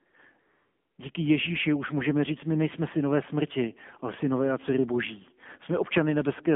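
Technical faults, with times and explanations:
throughout, AMR narrowband mobile codec: The speech has a buzzy, synthetic edge with plainly audible coding damage. It is confined to a band of about 150 Hz to 3.5 kHz, so there is no air or sibilant sparkle above it. The mobile codec rebuilds each 20 ms frame from a vocal-tract model driven by a few pulses. The coarseness of the damage fits the 7.4 kbps mode and an 8 kHz sampled narrowband line.
0.10–0.14 s and 0.40–0.98 s, AMR comfort noise: Twice near the start, the real background gives way to a smooth, steady hiss that switches in and out, first for a brief 40 ms and then for 580 ms. The phone judged these moments silent and stopped sending speech frames. The receiver then filled each gap with synthetic noise built from a rough description of the background's level and spectrum.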